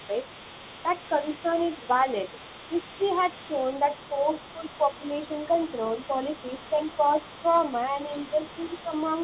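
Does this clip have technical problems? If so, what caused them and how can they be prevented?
Yes. Throughout the clip, from 0 to 9.2 s, a second, fainter voice sits roughly 20 dB under the main speech. This is other side's voice leaking through, most likely because the far end's audio played from a loudspeaker reached the microphone and the echo canceller left part of it behind. Unlike crosstalk on a line, this residue follows the far talker's own rhythm. Using a headset, or giving the canceller a clean reference signal, prevents it.

The main speech also dips in three places: 4.55 to 5.02 s, where it falls by about 10 dB, then 6.7 to 6.8 s and 8.13 to 8.38 s, each about 5 dB. This is speech suppressed in double talk, likely because the canceller could not tell the talker from the echo while both were active and attenuated everything. A dropout from packet loss removes the sound entirely, but these dips only duck it, and only while the leaked voice is present. 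Better double-talk detection in the echo canceller, or a headset, prevents it.

Nothing is heard above 4 kHz, which fits a G.711 call path at 64 kbps.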